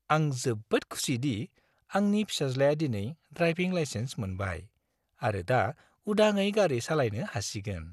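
Speech with plainly audible MP2 compression damage throughout. Nothing remains above 12.1 kHz, and a gurgling, granular texture likely comes from starved upper sub-bands, fitting roughly 80 kbps.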